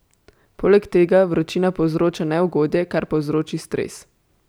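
No technical faults can be heard anywhere in the speech recording. There is nothing to place on a timeline.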